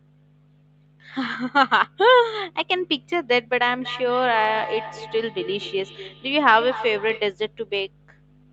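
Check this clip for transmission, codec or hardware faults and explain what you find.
One fault: feedback echo between two devices, from 3.82 to 7.34 s. Speech returns roughly every fifth of a second, up to about 14 dB below the original. Unlike room reverb, the repeats are distinct and evenly spaced, each thinner and more ringing, because two nearby devices keep re-capturing each other's playback.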